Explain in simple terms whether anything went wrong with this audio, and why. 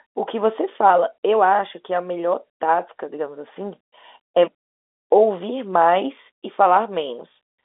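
Nothing went wrong: the speech sounds like an ordinary landline call, with the narrow, thin tone normal for telephone audio, and nothing in the signal stands out as a problem.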